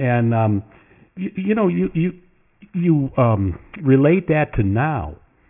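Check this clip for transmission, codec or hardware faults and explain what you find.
There's one fault, and it runs through the whole clip: aliasing. The speech sounds like it was resampled down without an anti-aliasing filter, which fits a drop to a 6 kHz sample rate, so everything above the 3 kHz fold point mirrors back down onto wrong frequencies. You hear it as gritty, metallic sibilants and a harsh fizz sitting around 25 dB under the speech, with the spectrum jammed right up against 3 kHz.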